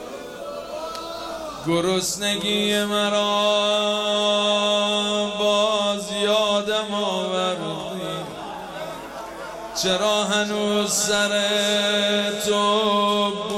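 Nothing stood out as a technical problem on listening.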